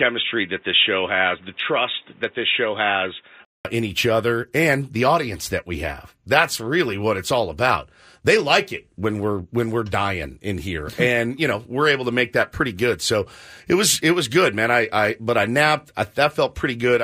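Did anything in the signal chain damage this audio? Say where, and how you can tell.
Yes. Until 3.65 s the speech sounds dull, with nothing above 3.8 kHz and faint background noise, then a 200 ms gap. Likely cause: the driver's input switched to a poorer device.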